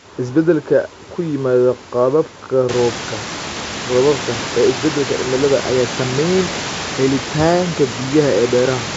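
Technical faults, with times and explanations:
No technical faults; the room noise rises by about 17 dB at around 2.5 s and then sits about 11 dB under the speech, and the G.722 wideband coding at 64 kbit/s leaves nothing above 7.7 kHz with at most faint coding hiss.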